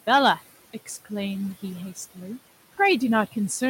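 A speech recording with noise suppressor artifacts throughout: the suppressor pulls the room noise, which sits about 19 dB below the speech, down by about 16 dB in the gaps and lets it return under each phrase. On a spectrogram the background floor pumps between dark pauses and a hazier band beneath the voiced energy. Hard clipping occurs from 0.09 to 0.32 s, overdriven by about 5 dB, and again from 2.81 to 3.55 s, by about 3 dB. Some stage could not pass the peaks, so their tops were sheared flat. This is heard as crackle on loud syllables, seen as squared-off flat-topped peaks on the waveform and as vertical smears of harmonics reaching far up the spectrogram.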